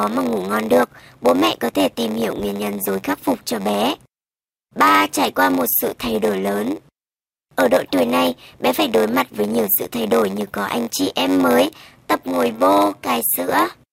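A block size mismatch (padded) runs throughout the clip: one stage delivers shorter blocks than the next reads, which fits a 512-sample block. Each block is topped up with silence, producing a buzz at 93.8 Hz, and the speech drags to 0.938 times its normal speed with its timbre unchanged.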